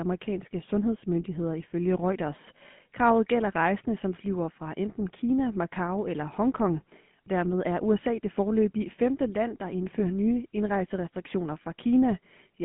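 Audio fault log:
Throughout: GSM full-rate codec. Buzzy, gravelly pulse-driven speech, consistent with 13 kbps; the spectrogram shows a hard ceiling near 3.8 kHz and little energy below 150 Hz.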